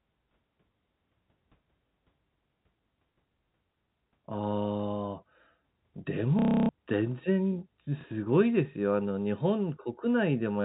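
Packet loss with last packet repeated occurs from 6.39 to 6.69 s and again from 8.01 to 8.04 s. Each time, the receiver filled the gap by replaying the last packet it had until new ones arrived. The first run gives a 0.3 s robotic stutter buzzing at about 33 Hz, which fits 30 ms packets. The second is a single 30 ms repeat. Both are heard through the narrow telephone band of the G.711 link.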